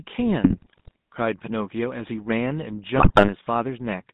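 Buzzy, gravelly speech is confined to a narrow telephone band of roughly 150 Hz to 3.7 kHz, the roughness of the GSM full-rate codec, which fits a 13 kbit/s stream. The codec rebuilds the voice from a vocal-tract filter excited by sparse, regularly spaced pulses, so the fine detail is lost and a hard ceiling sits near 4 kHz. Squawks, pops and gargling then break through from 0.44 to 0.96 s and again from 2.96 to 3.33 s. These are GSM bit errors: corrupted filter, pitch and gain values reached the decoder and warped the spectrum and level frame by frame. The second burst sounds like the denser of the two.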